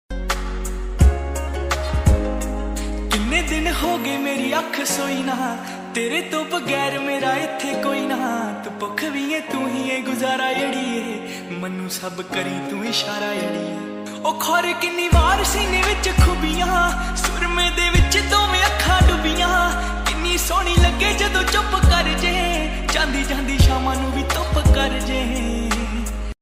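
Nothing in the recording stands out as a technical fault; it just runs along without any glitch, dropout or distortion catching the ear.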